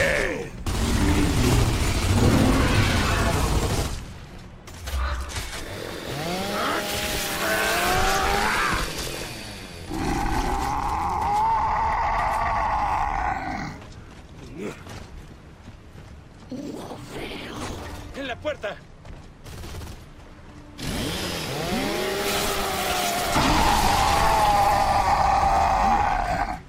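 Nothing in this audio stands out as a technical problem; it just runs along without a hitch anywhere.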